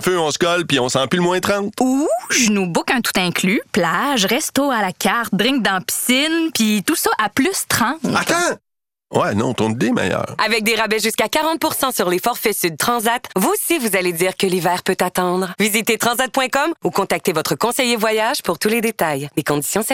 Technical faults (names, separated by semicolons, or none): DAB burbling